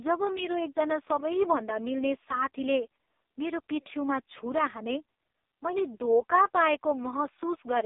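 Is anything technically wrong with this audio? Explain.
Yes. The AMR narrowband mobile codec affects the whole clip. The speech was squeezed through a vocal-tract model at 8 kHz sampling, leaving a 300 Hz to 3.7 kHz band with nothing above 3.8 kHz. Heavy damage gives a buzzy, synthetic voice, which fits AMR-NB's lowest 4.75 kbps mode.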